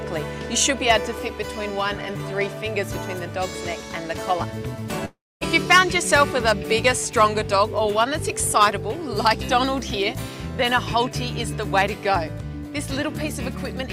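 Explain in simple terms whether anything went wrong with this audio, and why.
A long network dropout occurs from 5.05 to 5.44 s. The sound breaks off, and what replaces it is a smeared continuation of the last moment that fades into a buzz, then roughly a quarter second of near silence. When the audio returns, about 0.36 s of it is simply gone. This is likely a stretch where the audio data stopped arriving, so the player filled the gap with guesswork and then quiet.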